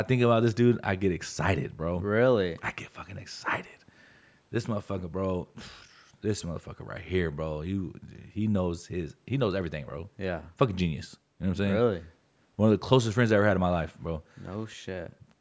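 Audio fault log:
The speech carries the normal character of a call's microphone processing, with the lowest bass trimmed by its high-pass filter and nothing present above 8 kHz.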